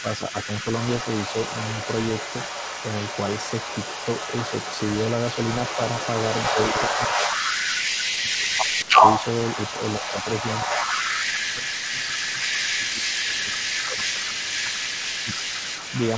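A speech recording in which a second, delayed copy of the speech trails the original by about 231 ms throughout, at roughly the same loudness. This is an echo leak: the far end's echo canceller likely failed to remove what its microphone picked up from its loudspeaker and sent it back. The speech also dips in level or drops out in pieces at 0.02–0.66 s, 6.5–7.73 s, 8.19–9.03 s, 9.56–10.28 s, 10.68–10.77 s, 11.24–14.87 s and 15.22–15.72 s, typically by around 10 dB and most deeply and longest in the 11.24–14.87 s stretch. That is speech suppressed in double talk, likely because the canceller could not tell the talker from the echo and turned both down. The call codec, G.722 at 64 kbps, also limits the band, with nothing above 8 kHz.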